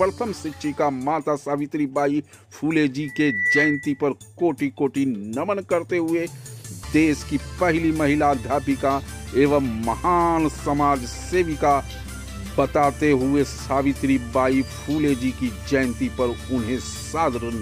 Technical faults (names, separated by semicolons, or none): loudspeaker feedback squeal